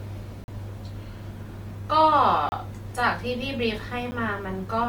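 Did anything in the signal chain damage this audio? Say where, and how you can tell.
Yes. Opus compression runs through the whole clip: the speech sounds grainy and rough rather than swirly, yet the spectrum stays fullband to about 20 kHz. That points to the codec stage, likely Opus in its music (CELT) mode at roughly 24 kbps, filling starved bands with noise.

Blocks of digital silence occur at 0.44–0.48 s (40 ms), 2.49–2.52 s (30 ms) and 4.11 s (10 ms). Each cuts hard to silence and back. This points to the driver or buffer stage, where output buffers weren't filled in time.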